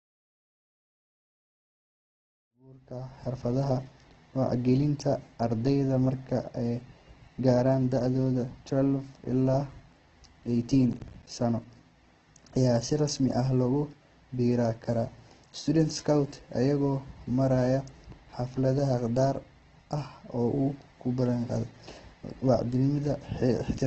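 Speech, faded in smoothly to full level by about 3.77 s, with heavy coding damage throughout and a short burst of breakup mid-clip. Nothing survives above 8.2 kHz, and the voice has a rough, grainy, noisy texture rather than swirling. This is likely Opus compression: the energy-preserving band filling of its CELT music mode turns voiced tones gritty, and the wideband cut-off and damage level fit a low rate around 12 kbps. From 10.93 to 11.27 s there is processor overload crackle. The audio is chopped by a run of brief hard-edged dropouts to silence, heard as gritty tearing. Each dropout is a buffer the processor failed to deliver in time. The dropouts fit buffers of roughly 10 ms, with around seven missed before the load eased.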